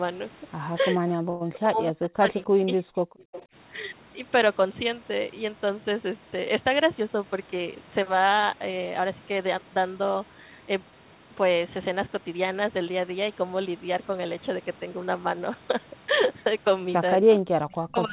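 From 0.91 to 2.37 s the speech is suppressed in double talk, dipping by as much as roughly 40 dB over about a second in total. The likely cause is an echo canceller that turned the talker down while the far side was also speaking. On a waveform the envelope collapses in patches; on a spectrogram the harmonics thin out or vanish in ragged blocks.

Inside that stretch, at 1.30 to 1.42 s, there is a call audio freeze. For 104 ms the receiver fills the gap by stretching the last sound into a fading buzz, and then the speech resumes where it stopped. The likely cause is a jitter buffer that ran dry while packets were held up. A spectrogram shows smeared, static bands with no onsets, and nothing is lost from the speech.

Echo leak comes in three brief scraps: 2.02 to 2.06 s, 3.18 to 3.45 s, and 17.34 to 17.39 s. Each is a faint copy of the voice delayed by 284 ms, at about 20 to 25 dB below the speech. 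It likely comes from a far-end loudspeaker that the canceller did not fully remove. On a spectrogram it shows as weak, thin duplicate harmonics that trail the originals.

Double-talk suppression returns from 2.57 to 3.03 s and from 17.20 s to the end of the clip, with the same deep, choppy drops in level.

Between 7.00 and 9.01 s a jitter buffer speed-up plays the speech at 105% with its pitch unchanged, which makes it sound slightly hurried. The receiver cut short pitch-period pieces adding up to about a tenth of a second in order to shrink its backlog. In the waveform the cycles look compressed in time, and on a spectrogram the syllable spacing tightens. Throughout, the band stops at 4 kHz, which fits narrowband G.711 coding.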